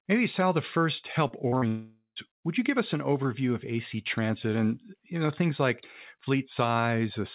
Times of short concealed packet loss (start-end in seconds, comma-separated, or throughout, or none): 1.28-1.64